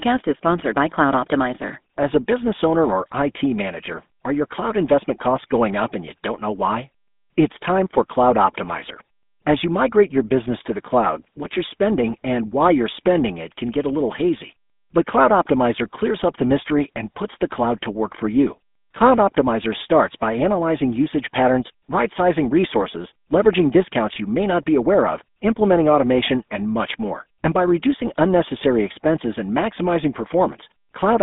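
From start to finish the speech carries GSM full-rate codec damage: the excitation is rebuilt from regularly spaced pulses, giving a plainly audible buzzy, gravelly roughness consistent with 13 kbps coding. Plain telephone band-limiting (200 Hz to 3.6 kHz, nothing above 3.8 kHz) would only muffle the sound, not make it rasp like this.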